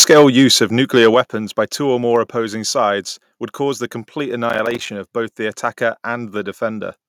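From the opening to 0.55 s the loudest syllables carry a harsh, crackling edge, which is microphone overload, likely from input volume set too high. Peaks run about 7 dB past the converter's limit, and a few percent of samples are flattened. Unlike a buffer-related crackle, the distortion follows the loudness of the speech.

At 0.13 s comes a microphone volume stepped down event, with the whole level dropping about 2 dB in one step. A second overload from 0.96 to 1.2 s (about 4 dB over, with a smaller share of samples clipped) is followed at 1.14 s by a larger drop of about 5 dB. A further drop of about 2 dB comes at 2.16 s. Each is a clean step in level, likely automatic gain reacting to clipping. Voice and background fall together, with no added distortion.

From 4.50 to 4.88 s, processor overload crackle produces a gritty tearing. Many audio deadlines were missed in a row, and each one left a short hard-edged silent gap. 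This fits buffers of about 5 ms and roughly fifteen misses. Unlike overload, this crackle does not follow the loudness of the speech.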